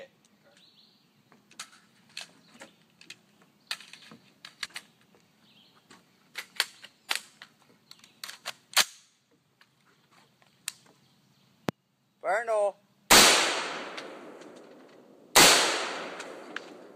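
The audio has two short disruptions typical of damaged data in a compressed stream. At 4.66 s there is an instantaneous blip, and from 8.46 to 8.50 s a longer burst of about 40 ms. In both places corrupted bytes in the encoded stream cause the decoder to misread or reject the affected frames. It then loses frame sync and has to search for the next valid header, producing a brief non-musical artefact instead of the intended signal.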